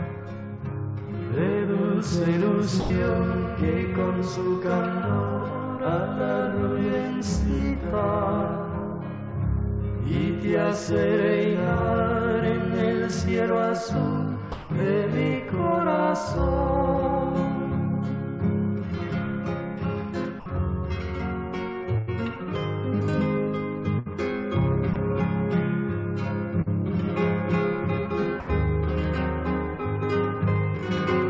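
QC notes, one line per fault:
2.80–2.90, 14.52–14.70, 20.40–20.46, 24.94–24.96, 28.40–28.48 s: sound dropped by the voice detector. The sound briefly gives way to soft steady noise, likely comfort noise filling in after the detector judged it background.
21.98–22.09 and 23.99–24.08 s: burst of packet loss. Roughly 100 ms and 60 ms go missing. The last sound is stretched and faded, then the audio jumps ahead.
26.62–26.68 s: short concealed packet loss. About 40 ms was patched by extending what came before and blending back, leaving a quick smear over the 8 kHz-limited G.722 band.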